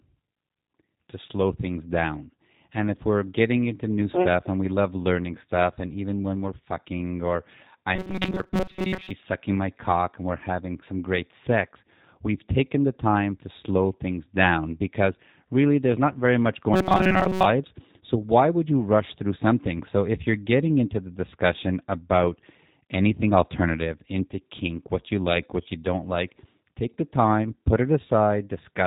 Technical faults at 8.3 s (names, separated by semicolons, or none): G.729 codec; robotic sound from repeated short buffers